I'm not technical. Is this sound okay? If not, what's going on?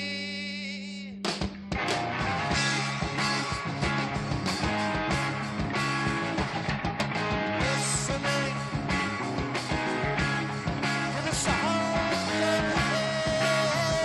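Yes, this sound is okay, and nothing is going on with it that needs fixing.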